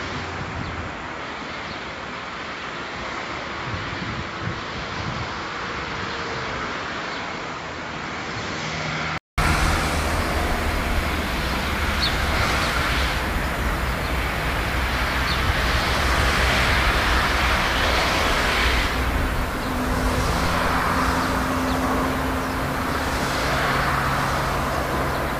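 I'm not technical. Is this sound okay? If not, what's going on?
No. Until about 9.4 s it sounds dull and quieter, then briefly goes silent. That's likely an input switched to a poorer device.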